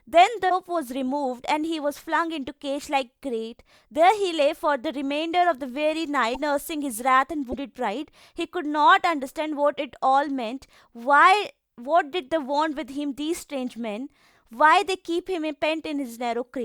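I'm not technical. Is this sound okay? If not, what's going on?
No. At 0.49, 6.34 and 7.51 seconds the speech skips ahead and leaves a glitch about 30 ms long. That's likely a broken MP3 bit reservoir: a chunk went missing, and the next piece grabbed the wrong data.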